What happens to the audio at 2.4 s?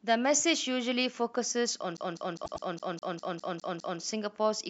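A CD stuck on one turn is looping from 1.97 s to 4.01 s. The laser jumps back each turn. About 0.2 s of sound repeats nine times, with a short mute at each jump.

Repeated frames overlap it from 2.44 s to 2.65 s. A block of about 0.1 s, which fits four compressed frames, plays twice more. It stutters and adds 0.21 s.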